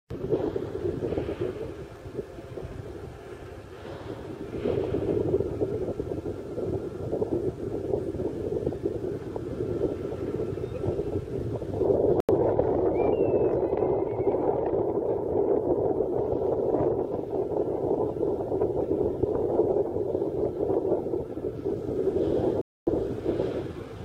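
A block of digital silence cuts in at 12.20 s and runs to 12.29 s, about 85 ms, which fits a 4096-sample buffer the program failed to fill in time. A second block of digital silence, at 22.61 to 22.87 s, lasts 256 ms. In both, the sound cuts out abruptly and returns with no fade. The first is heard as a brief hole and the longer second as a clear dropout in the sound.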